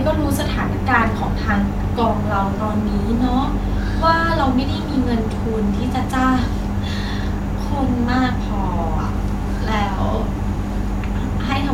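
From 2.41 to 5.79 s, a train of clicks ticks through the speech. About thirty even clicks arrive 8.6 per second, roughly as loud as the voice. Likely interference or a faulty connection.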